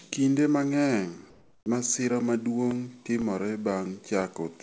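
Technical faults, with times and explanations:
1.30–1.66 s, comfort noise in place of the background: for 360 ms the quiet room tone becomes a smooth, featureless hiss, about 2 dB softer. Likely the sender stopped transmitting during silence and the receiver filled the gap with synthetic noise.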